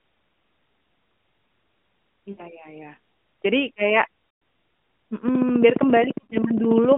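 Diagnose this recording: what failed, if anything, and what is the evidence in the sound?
Lost AMR speech frames on the network side at 2.32–2.45 s, 4.30–4.42 s and 6.24–6.35 s. The decoder stretches the last good frame with falling gain, so the sound smears and dips.

A train of clicks from 5.28 to 6.93 s: about 30 regular ticks at 14.7 per second, peaking roughly 15 dB over the signal. That's likely interference or a faulty connection or power supply.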